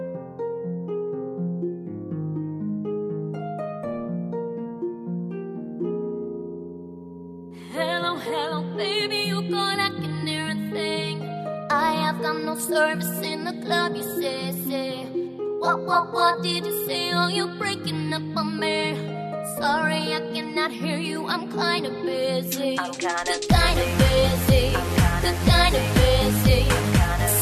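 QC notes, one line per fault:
No fault to note for QC.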